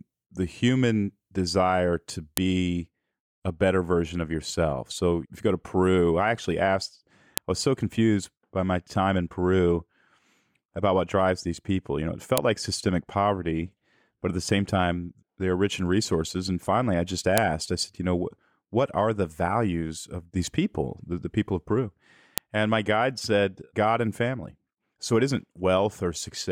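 Speech with file header played as audio: sharp clicks at 2.37, 7.38, 12.38, 17.38 and 22.38 s, five seconds apart, after "the human desire to" and "know it", where chunk headers were left in.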